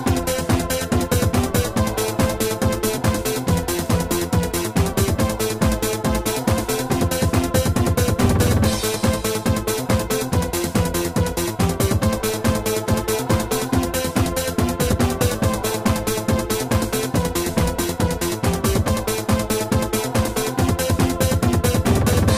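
Overlap between stream segments occurs at 2.98, 12.94 and 14.93 s. The timestamps of adjoining 2-second segments overlapped, so the player trimmed about 6 to 14 ms of real audio. The waveform jumps at each joint, heard as a click or tiny skip.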